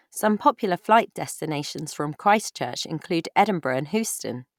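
Nothing in this bit of speech calls for comment, since there's no technical fault to be heard anywhere in it.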